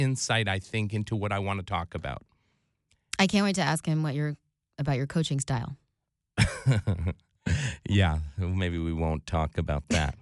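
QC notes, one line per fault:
No faults found on listening. Nothing calls for a timestamp or a note.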